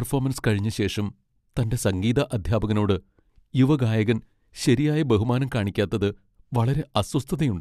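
Nothing in the speech stood out as a technical fault on listening.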